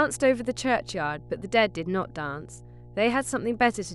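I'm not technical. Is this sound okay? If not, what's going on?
No, there's mains hum: a steady low 60 Hz buzz under the speech the whole way through, fairly noticeable, from electrical power leaking into the recording.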